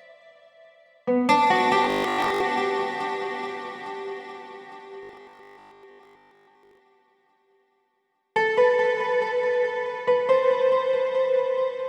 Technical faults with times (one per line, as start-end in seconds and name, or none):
1.84-2.40 robotic sound from repeated short buffers
5.03-6.79 robotic sound from repeated short buffers